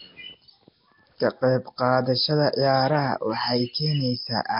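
Throughout, the speech was most likely squeezed through Nellymoser compression at a low bitrate. Weak bands turn to hiss, everything smears underwater, and nothing sounds above 5.3 kHz.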